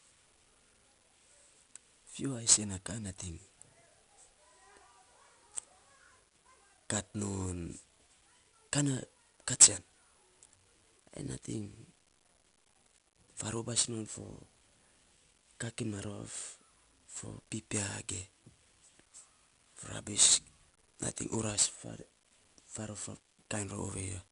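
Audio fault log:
Throughout: 4-bit ADPCM compression. Each sample is coded as a small 4-bit step from a predicted value, with the step size adapting as the speech moves, so the coding error becomes a gritty hiss that rises and falls with the level and is plainly audible on louder syllables. Sharp onsets roughen where the step cannot grow quickly enough. Nothing is present above 10.6 kHz, which fits a stream of about 88 kbps at a reduced sample rate.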